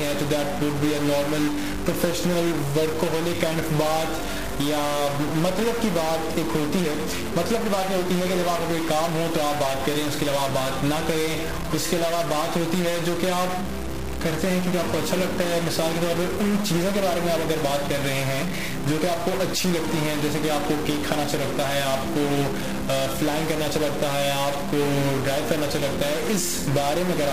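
A stuck bit runs through the whole clip, from start to finish. The sound carries a harsh, buzzy distortion that tracks the waveform, and the quiet stretches are not silent but filled with a gritty noise floor. The likely cause is a single data bit held at a fixed value by a broken line or converter, so roughly half the samples are pushed off by one step of about -25 dBFS. Because that step is so large, the added noise in pauses is plainly audible.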